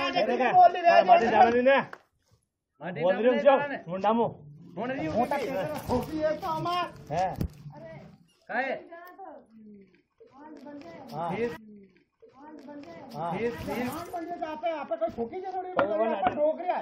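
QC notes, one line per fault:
11.55–13.57 s, stream segment repeated: about 2 s of audio plays a second time, with a small blip at 11.55 s where the playback jumps back and the same passage starts over. The player fetched or queued one segment of the stream twice, so a block of about 2.02 s already heard is inserted again and the clip runs that much longer. The blip comes from the abrupt seam between the end of one segment and the restart of the duplicate.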